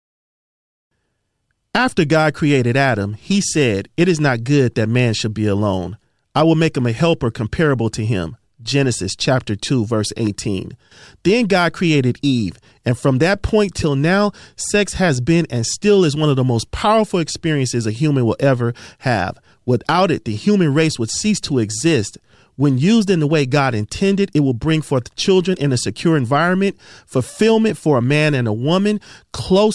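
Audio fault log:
No faults detected in the speech recording; nothing to log.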